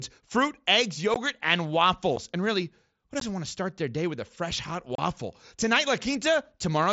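Unconcealed Bluetooth headset packet loss punches abrupt silent holes at 1.14, 2.16, 3.20 and 4.95–4.99 s, lasting about 15, 7.5, 15 and 30 ms, through the light grain of the mSBC link. Each points to one to four 7.5 ms headset frames dropped, with nothing filled in. Concealed loss would smear or repeat the sound instead of leaving these hard-edged gaps.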